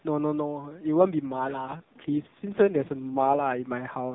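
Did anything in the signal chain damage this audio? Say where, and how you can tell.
Yes. The fault is an AMR rate drop at the network stage. From 0.95 s to 3.68 s the speech turns rougher and buzzier, with no gap and an unchanged narrowband ceiling near 4 kHz. That fits the link forcing AMR-NB from 12.2 kbps down to 4.75 kbps.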